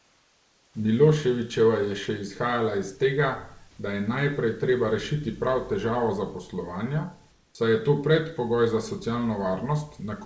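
Speech in which the room background is twice replaced by comfort noise: from 0.00 to 0.74 s, and from 7.31 to 7.55 s between "rešiti prav težavo zaposlovanja" and "saj je to predpogoj". Unlike a noise gate's dead silence, a steady, featureless hiss about 3 to 4 dB quieter stands in, likely from discontinuous transmission.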